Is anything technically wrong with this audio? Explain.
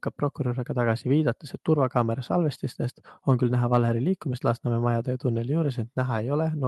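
No, nothing's wrong here; the speech simply comes through a WebRTC call path using the Opus codec, and the top end rolling off around 12 kHz is just what that codec setting does, not a fault.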